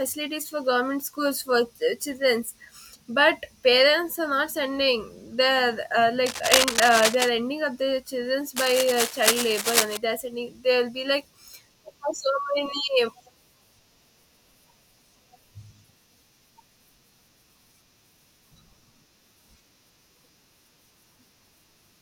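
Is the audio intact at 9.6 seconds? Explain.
No. At 9.6 seconds the speech is overlaid by cable scratch noise, which runs from about 8.56 to 9.97 s. It sounds like dense, irregular scratching and rustling sitting only a little below the speech level, roughly 5 dB under it. The likely cause is a worn cable, connector or control being moved, so its contact resistance fluctuates rapidly and injects uneven bursts of noise into the signal path.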